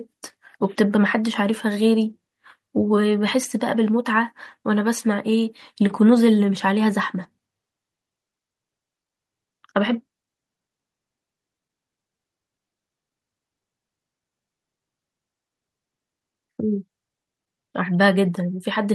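Nothing stood out as a technical fault on listening to this speech recording.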